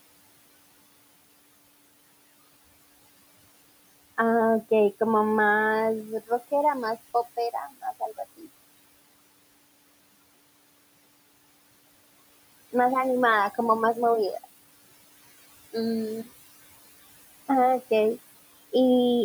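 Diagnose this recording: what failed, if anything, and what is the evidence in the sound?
The noise suppressor in the call-processing stage is over-working. It pulls the steady background down by about 19 dB frame by frame, so the room noise drops away between phrases and comes back under the speech.

That same noise suppressor also cut into the speech itself, mistaking quiet parts of it for noise. At 7.37 to 7.84 s it drops the signal by up to about 20 dB, and at 8.37 to 8.48 s by about 17 dB. Roughly a tenth of a second in each stretch sounds swallowed.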